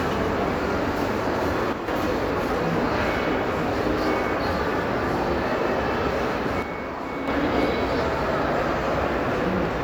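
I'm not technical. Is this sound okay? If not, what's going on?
No. The sound briefly drops in loudness twice, from 1.73 to 1.88 s and again from 6.62 to 7.28 s. This is likely one channel dropping out: one side of the stereo signal cuts off, so the combined sound suddenly gets quieter but is otherwise unchanged.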